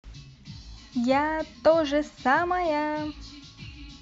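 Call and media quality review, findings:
No faults found in this speech recording.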